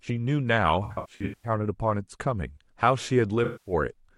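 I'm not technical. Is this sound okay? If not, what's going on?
No. The speech has two damaged patches, caused by AAC frame loss with concealment. Small chunks of the compressed audio went missing, and the player covered each gap by guessing from the last good sound. From 0.84 to 1.49 s, about 0.4 seconds of audio is lost in bits spread through that stretch, the longest about a tenth of a second. It sounds smeared and noisy. From 3.44 to 3.73 s, a shorter gap does the same.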